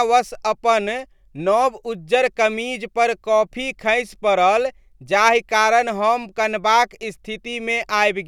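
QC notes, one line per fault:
No faults were found in this speech clip. Nothing in it calls for a timed entry.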